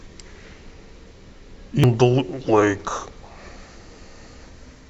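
At 1.84 s there is damaged data in the compressed stream: a stretch of the coded speech arrives corrupted, so the decoder can no longer interpret the frames at that point. It misreads or discards them, loses its place in the bitstream and has to hunt for the next valid frame header before decoding resumes. That momentary breakdown comes through as a single brief glitch, a chirp, squawk, click or short hole that cuts across the speech.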